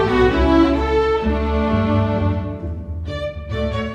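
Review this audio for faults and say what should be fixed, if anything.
No faults are audible anywhere in this recording, so nothing needs fixing.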